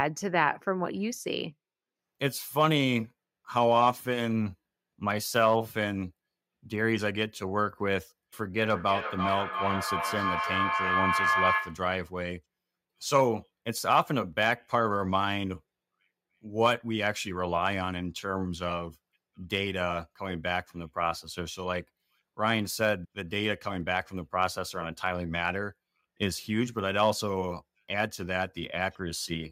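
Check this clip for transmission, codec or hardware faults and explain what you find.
One fault appears. Feedback howl, 8.64 to 11.97 s: a microphone-loudspeaker loop gains level each trip, with repeats roughly every 0.3 s, swelling a tone near 1 kHz to speech level. On a spectrogram it is a bright horizontal line.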